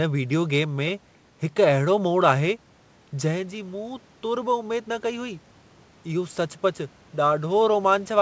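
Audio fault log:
3.13–5.47 s, automatic gain rising: the automatic gain control answered a drop of about 9 dB near 3.0 s, when the talker moved away, by raising gain about 4 dB over 2.3 s, so voice and room noise swell together.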